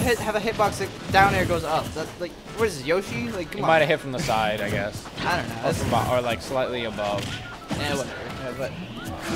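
No technical faults are audible.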